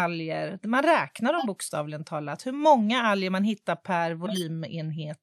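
At 1.38 to 1.46 s the speech is interrupted by a short burst of garbled tonal energy, a corrupt frame decoded: damaged bits in roughly one compressed frame were played as if valid, misplacing energy across the spectrum, peaking near -15 dBFS. A second, longer one runs from 4.26 to 4.43 s, spanning a few consecutive frames at around -20 dBFS, heard as a brief chirping squeak.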